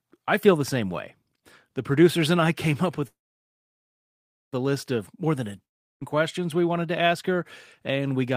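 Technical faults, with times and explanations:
3.07–4.54 s, call audio freeze: the sound stops and a brief fading tail of the last moment gives way to near-silence for about 1.38 s of a 1.45 s gap. When the audio resumes it picks up exactly where it left off, with nothing skipped, so everything after it runs about 1.45 s late. The likely cause is packets delayed in transit, draining the jitter buffer. The delay, rather than loss, separates this from a dropout.
5.65–6.03 s, long network dropout: a shorter hole of about 0.36 s, almost all of it (roughly 0.35 s) silent after a quick decaying tail of the preceding sound. Here the audio comes back further along than where it stopped. About 0.36 s of material is simply gone, and the timing does not slip. That points to packets that likely never arrived at all rather than arriving late, which is what distinguishes it from the freeze earlier.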